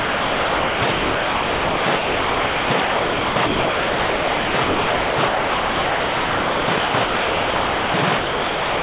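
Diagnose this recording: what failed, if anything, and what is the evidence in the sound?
Call processing is the failing stage: sound chopped by the voice detector. From 0.0 to 8.82 s the audio drops repeatedly into synthetic comfort noise, with about 7.8 s replaced, so little real sound survives. Band-limited to 4 kHz by the G.711 call path, this is likely sender-side voice detection gating marginal sound as silence.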